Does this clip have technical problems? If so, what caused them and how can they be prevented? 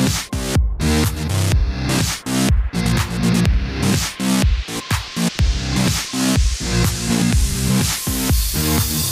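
Yes. Around 7.49 to 7.55 s the sound briefly garbles into a flutter: its frames are out of order. Two neighbouring blocks of about 26.1 ms each, which fits one codec frame apiece, arrived swapped and were decoded that way, so the stretch plays with its halves exchanged and no time is lost. Numbering frames and reordering them in a jitter buffer before decoding prevents this.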